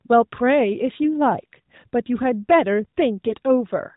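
A speech clip carried over the AMR narrowband mobile codec, with light buzziness and nothing above 4 kHz. From 3.28 to 3.35 s, AMR bit errors make the voice scratchy and gargly. That span fits two corrupted 20 ms frames, with a few percent of their weaker bits flipped.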